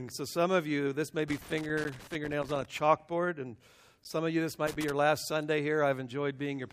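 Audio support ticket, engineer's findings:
Loose connector crackle, 1.28 to 2.65 s and 4.67 to 4.91 s. Irregular scratchy bursts. Worn or dirty contact in a cable or jack intermittently opening and closing as it shifts, chopping the signal, with pops wherever DC sits on the line. Reseat or replace the connector.

Block of digital silence, 1.84 s and 4.04 s, each about 10 ms. Hard dropout, heard as a tick or dip, no fade. Output buffer not filled in time, or invalid values zeroed in processing. The first lands inside the earlier crackle burst.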